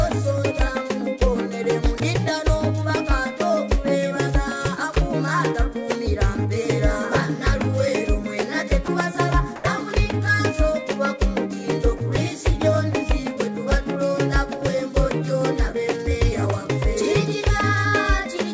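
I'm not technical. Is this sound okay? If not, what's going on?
No. The likely cause of the brief gaps is that the call system's voice detector mistook part of the sound for background and briefly stopped sending it. This is sound dropped by the voice detector: at 1.98, 8.86 and 11.98 seconds a tiny slice of sound vanishes and is replaced by a short burst of plain hiss.

Separately, around 9.56 to 9.64 seconds the sender likely paused transmission, and the receiving end filled the gap with made-up noise. This is comfort noise in place of the background: the real surroundings are swapped for a flat, featureless hiss for that moment.

The sound also travelled over an internet call line that carries nothing above 8 kHz.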